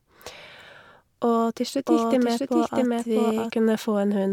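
From 1.87 s to 3.51 s the speech is a doubled audio track: a second, equally loud copy runs roughly 0.7 s behind, likely from a slower capture path. It starts and stops abruptly, and the waveform and spectrogram show every syllable pattern repeated at that fixed offset, full-band and undamped.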